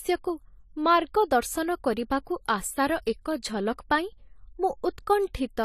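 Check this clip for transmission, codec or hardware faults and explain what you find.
One codec fault runs through the whole speech clip. Throughout, AAC compression, likely AAC-LC at a low bitrate around 32 kbps, quantises frequency bands coarsely, leaving nothing above 14.1 kHz and a plainly audible dull, smeared, fizzy texture.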